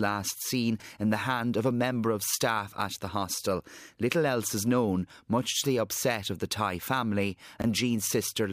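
Chunks out of order occur twice in this speech clip, at 0.80–0.84 s and 7.60–7.64 s. In each, a 20 ms chunk arrives one chunk late and plays after its successor, so nothing is lost but the sequence flips, leaving a brief jumbled blip with three hard joins.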